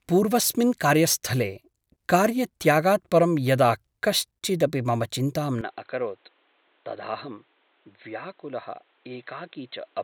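At 5.61 s the speech abruptly turns dull and boxy with no gap, losing everything above 4.2 kHz, dropping about 5 dB, and gaining a new noise floor roughly 35 dB down. This likely reflects the input switching to a poorer device, continuing to the end.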